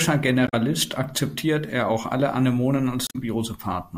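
A short glitch cuts into the speech from 0.45 to 0.54 s, just before "akzeptiert er auch alle", and a second one, about 0.09 s long, follows from 3.07 to 3.16 s. Both come from damaged data in a compressed stream. Bytes in those stretches of the encoded file were corrupted, so the decoder misread the affected frames and lost sync until it found a valid frame header again.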